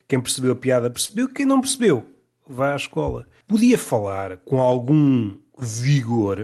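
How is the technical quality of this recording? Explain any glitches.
The speech has come through a call codec, with its usual coding noise and a top end that stops around 12 kHz, which fits an Opus stream at roughly 40 kbps. There's one glitch worth flagging.

Short stall from a late packet, 1.05 to 1.11 s, right after "percebeu a piada" and just before "quem não percebeu vá". A packet showed up late, the jitter buffer ran dry, and the receiver stretched the last bit of sound by about 35 ms until it arrived, then picked up exactly where it left off. Nothing's actually lost, but that sound hangs on a touch too long, with a slight buzz or dip, and everything after it runs 35 ms later.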